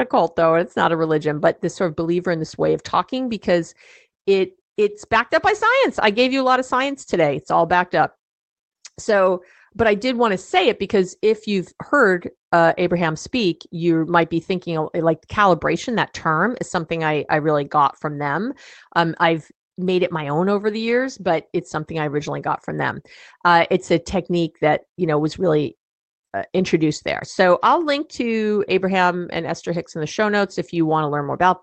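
No technical faults are audible in this speech.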